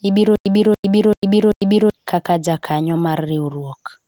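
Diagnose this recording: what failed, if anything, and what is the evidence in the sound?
A stutter with silent gaps runs from 0.36 to 1.90 s: the same 287 ms burst of speech plays four times, each followed by 100 ms of digital silence, giving an even 387 ms cycle. This points to the playback or streaming buffer. The likely cause is a stall, with each retry replaying the last buffered fragment and then running dry. The speech that should have filled that span is lost. The light Opus coding does not contribute.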